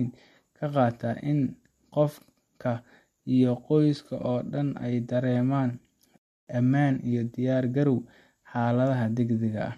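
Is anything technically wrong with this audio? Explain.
Yes. A rebuffering stall runs from 6.18 to 6.47 s: the player's buffer emptied, the speech falls silent, then resumes exactly where it stopped, adding 0.29 s.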